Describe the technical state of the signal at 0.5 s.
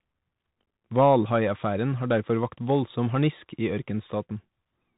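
At 0.5 s the Bluetooth CVSD headset codec is at work, as it is across the whole clip: one-bit up/down coding, which fits a 64 kbps stream, cuts everything above 3.8 kHz, leaving granular hiss and scratchy s sounds.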